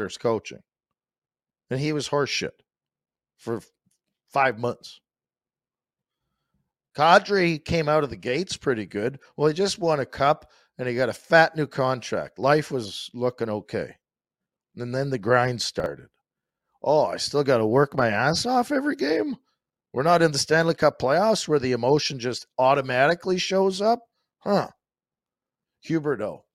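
At about 15.8 s, just after "then the grind", the speech jumbles for a fraction of a second, a brief garbled stutter, over by 15.86 s. This is chunks out of order: one 20 ms chunk of audio arrived late and plays two chunks after its proper place, so the 60 ms stretch runs in the wrong sequence. Nothing is missing, but there are three hard joins between mismatched waveforms.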